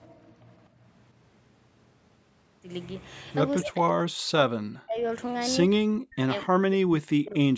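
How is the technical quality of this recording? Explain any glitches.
The recording has clear call echo-control problems: the background is briefly gated, delayed echoes leak through, and the speech is repeatedly cut down while the other side talks.

Background gated by the echo canceller: from 0.24 to 0.46 s and from 0.7 to 0.81 s, the room tone dips by about 17 dB and then about 14 dB before recovering. The canceller clamped the microphone while its loudspeaker played. On a waveform the noise floor shows short notches, and a spectrogram shows brief vertical gaps across the background.

Echo leak: at 0.51–0.55 s, 3.61–3.66 s and 6.41–6.45 s, a short copy of the speech trails by 243 ms. It is barely audible at first, clearly present around 3.6 s and faint near 6.4 s. This is likely residual loudspeaker pickup that the canceller failed to remove. A spectrogram shows faint, shifted copies of the speech harmonics.

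Speech suppressed in double talk: the voice sinks deeply or cuts out in pieces from 3.65 to 5.04 s, 5.8 to 6.29 s and 6.45 to 7.43 s. These drops likely come from the canceller muting both talkers when they overlap. The waveform shows a collapsed envelope, and the spectrogram shows fragmented, thinned bands, all below the normal 8 kHz call ceiling.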